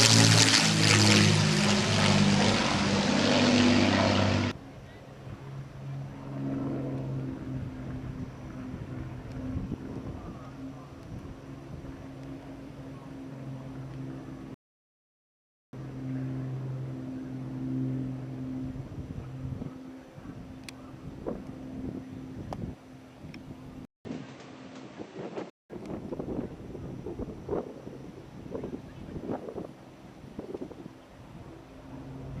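A rebuffering stall runs from 14.54 to 15.73 s. Playback drained its store of downloaded audio and halted until more data came in, so the sound drops to silence for about 1.19 s and then picks up exactly where it left off, with nothing skipped.

At 23.85 s the sound breaks for about 200 ms, and from then until 25.70 s it turns duller, with nothing above 8.6 kHz, a new noise floor roughly 30 dB under the signal, and no clear level change. This is likely an input switched to a poorer device.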